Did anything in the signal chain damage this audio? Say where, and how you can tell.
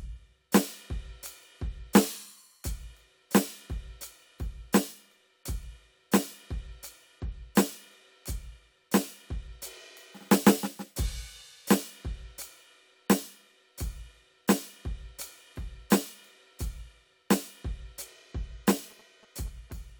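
Yes. GSM signalling bursts enter the analogue wiring from 18.76 to 19.72 s: a galloping pattern of ticks and short 217 Hz buzzes well below the music. A nearby phone's radio bursts are rectified by the circuit. Unlike steady mains hum, it comes in irregular groups.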